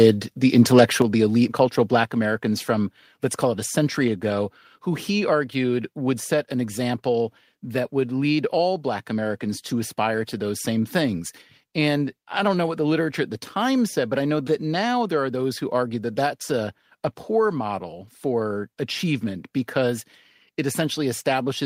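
At 1.02 s the speech and the background behind it drop abruptly in level by about 6 dB, then fall again by about 3 dB at 2.04 s and by a smaller step of about 1 dB at 4.08 s, each change happening at once rather than fading. This staircase pattern is the mark of a microphone volume stepped down, likely the call software cutting the input device's gain in successive steps after judging the signal too hot.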